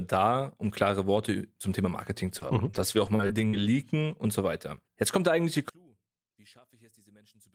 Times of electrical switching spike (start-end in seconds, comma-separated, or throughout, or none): none